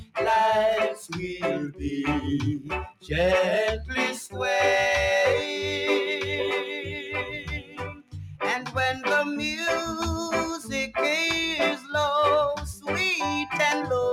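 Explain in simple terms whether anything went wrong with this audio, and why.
A noise suppressor applied to music or sounds runs through the whole clip. This processing is built for speech. It mistakes steady tones, ambience and echoes for background noise and keeps turning them down, so the level bobs up and down a little and tails thin out.

Sound cut by the noise suppressor happens at 0.0 to 0.16 s, 2.9 to 3.11 s and 6.84 to 8.15 s. At these moments the suppressor judged the sound to be noise and pulled it down sharply, with the longest stretch around 7 to 8 seconds.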